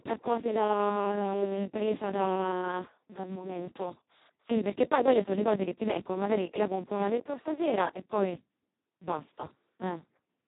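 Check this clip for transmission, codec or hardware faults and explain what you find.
One fault runs through the whole speech clip. Speex codec artefacts, throughout: the sound points to Speex at its lowest setting, around 2 kbps, where the CELP excitation gets almost no bits and it behaves nearly like a vocoder. Speech sounds heavily hoarse and robotic, with nothing above 3.8 kHz.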